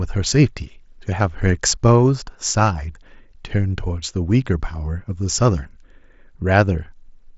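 No technical faults can be heard in this speech.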